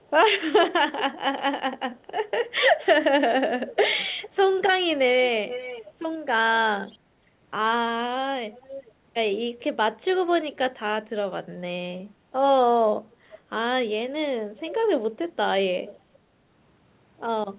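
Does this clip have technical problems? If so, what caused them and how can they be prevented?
Yes. The likely cause is an echo leak: the far end played the call on a loudspeaker, and its echo canceller let part of the microphone pickup return. A quieter copy of the speech trails 433 to 455 ms behind it at 0.04–1.03, 1.96–4.3, 5.49–6.98, 8.53–9.6, 10.53–10.58 and 15.86–16.19 s. It is strongest around 5.5–7.0 s. Using headphones or better echo cancellation at that end would prevent it.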